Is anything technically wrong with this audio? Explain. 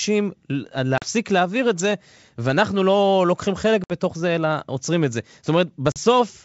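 Yes. Packet loss on an ADPCM call occurs at 0.98–1.06 s, 3.84–3.92 s and 5.92–5.98 s, leaving hard-edged silent gaps of 40 ms, 60 ms and 40 ms, each about two or three packets' worth. When the stream resumes, the decoder's adaptive predictor and step size no longer match the sender's, so the speech comes back with brief slight distortion before settling within some tens of milliseconds.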